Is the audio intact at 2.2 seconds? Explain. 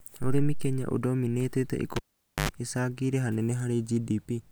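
No. At 2.2 seconds the speech falls inside a cable pulled and plugged in fault, running from 1.96 to 2.49 s. A live lead is yanked out, giving a pop. The signal then drops to near silence for 0.48 s. As the plug goes back, only its tip makes contact at first. That picks up a 50 Hz mains buzz lasting 0.09 s. A second pop follows as the connection seats and the speech returns.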